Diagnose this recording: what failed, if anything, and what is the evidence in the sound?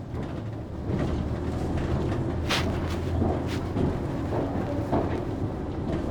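Nothing in the recording stood out as a failure on listening, so there is no faulty stage to point to.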